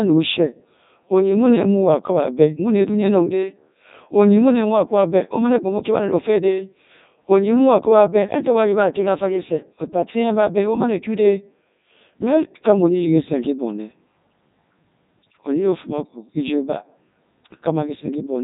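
Robotic, buzzy speech with nothing above 3.8 kHz runs throughout. This is the Codec 2 vocoder, consistent with its 3.2 kbit/s mode, rebuilding the voice from sine waves rather than keeping the waveform.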